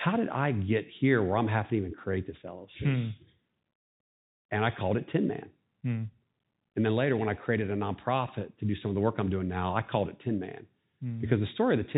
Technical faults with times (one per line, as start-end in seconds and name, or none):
none